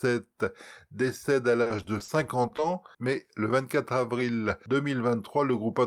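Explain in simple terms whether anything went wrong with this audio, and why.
Yes. From 1.62 to 2.60 s the speech turns choppy and robotic: repeated packet loss. Short gaps, none over 40 ms, kept recurring, each covered by stretching the last sound. A single dropout would be one isolated hole, not this rapid stutter.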